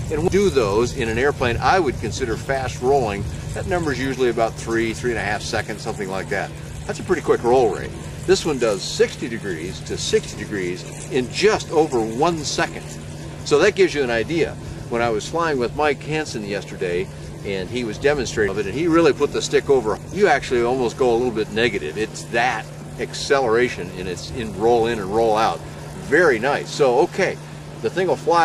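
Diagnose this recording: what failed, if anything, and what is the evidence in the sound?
The fault sits at the driver and buffer stage. At 0.28, 18.48 and 19.97 s the sound jumps abruptly forward, each time skipping around 300 ms of material. There is no gap of silence: the audio on either side is joined directly. That pattern points to a likely dropped buffer (overrun), where the capturing program failed to read its samples before the hardware overwrote them. That stretch was lost outright, and the stream resumed further on.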